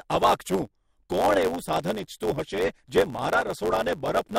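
A block size mismatch (truncated) runs through the whole speech recording, from start to finish. One stage hands over longer blocks than the next stage takes in, so the tail of every block is discarded. The regular gaps produce a buzz at about 92 Hz, a rate that fits 512-sample blocks being written, and the speech plays back 1.07 times faster while its timbre stays the same.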